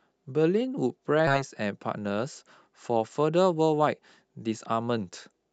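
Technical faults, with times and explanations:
1.27 to 1.29 s, skip ahead: With later audio already queued, the receiver dropped a stretch of roughly a second, either lost in transit or discarded when the jitter buffer overflowed, and moved straight on to what was waiting. No fill was inserted, so playback lurches forward with no audible gap. The speech on either side of the cut is butted together almost seamlessly, and the listener simply loses that second of talk.
3.23 to 3.88 s, jitter buffer speed-up: After a burst of packets arrived together, the buffer held more audio than its target and trimmed the excess by repeatedly cutting out short pieces one or a few pitch periods long. Around a tenth of a second was removed in total. The speech runs at about 112% of normal speed for this stretch, so it sounds briefly hurried, while its pitch stays unchanged. Through the Opus call path at 64 kbps, the sound lacks content above about 8 kHz.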